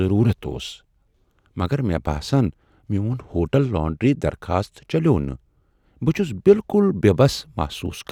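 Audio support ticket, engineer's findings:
Listened through the speech recording and found nothing to flag, so there's no fault to log on this ticket.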